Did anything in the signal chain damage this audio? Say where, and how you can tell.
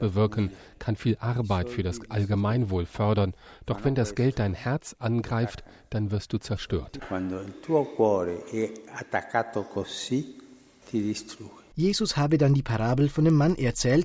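Yes. From 10.9 s to the end at 14.05 s, a steady tick runs under the sound at 10 per second. It appears only while signal is present. That points to a resampler restarted on every block, in the sample-rate conversion stage. Each 100 ms block was converted in isolation, likely from 44.1 kHz down to 16 kHz. So the filter saw false neighbours at every block edge. That small edge error repeats as the tick.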